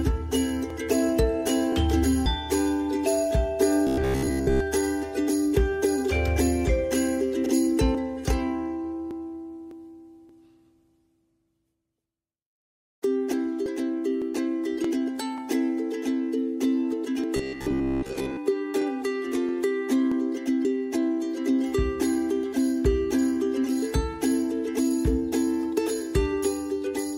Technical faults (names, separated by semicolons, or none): robotic sound from repeated short buffers